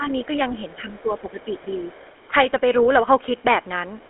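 GSM full-rate codec coding runs throughout the clip. The speech has the buzzy, gravelly roughness of a vocal-tract model driven by sparse pulses, which fits the 13 kbps GSM full-rate codec. The sound sits in a 300 Hz to 3.4 kHz line band, with nothing above 3.8 kHz.

Speech suppressed in double talk, from 0.0 to 0.09 s: the opening of the speech is pulled down by around 10 dB for about a tenth of a second. This is likely an echo canceller ducking the talker while both sides spoke at once.

Other side's voice leaking through, from 1.4 to 2.24 s: a faint second voice, roughly 30 dB below the main speech, sits underneath it. It is likely loudspeaker playback of the far end that the echo canceller failed to remove from the microphone.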